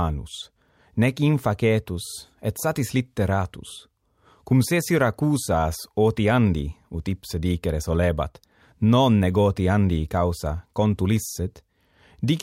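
No technical faults can be heard anywhere in the recording.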